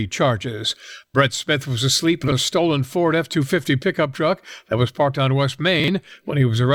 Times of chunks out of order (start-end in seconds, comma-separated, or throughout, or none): 2.24-2.32, 5.80-5.88